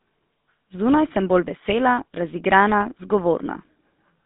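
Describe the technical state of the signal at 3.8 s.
At 3.8 s the speech carries the GSM full-rate codec that runs through the whole clip. Nothing reaches above 3.8 kHz, the band sits around 150 Hz to 3.7 kHz, and the pulse-driven vocal-tract model, consistent with 13 kbps coding, adds a buzzy, gravelly roughness that plain telephone band-limiting would not.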